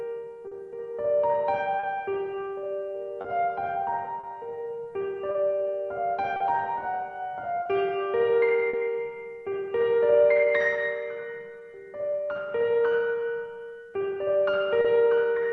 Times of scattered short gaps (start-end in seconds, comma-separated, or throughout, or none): 0.47-8.75